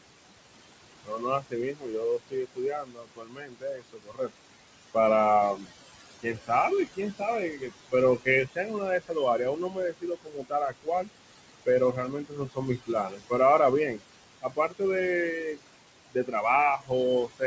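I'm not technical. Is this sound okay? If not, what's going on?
No, not quite. There are noise suppressor artifacts all the way through. The call's noise filter keeps guessing which parts of the sound are background noise and turning those down, moment by moment. You can hear that as the background dipping away in the gaps and creeping back under the talking. The room's own background noise sits under all of this.

The bigger issue is speech cut by the noise suppressor. At several points the filter mistook parts of the talking for noise and pushed them down too, so word endings and softer sounds come out swallowed or faint. It happens from 1.03 to 4.35 s (the worst stretch, about three seconds affected), briefly from 5.56 to 5.67 s, then 6.23 to 11.09 s, 11.66 to 13.32 s, 13.92 to 14.81 s, and from 16.13 s to the end.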